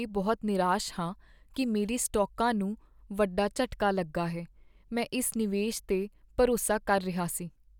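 Speech recording with no audible technical faults.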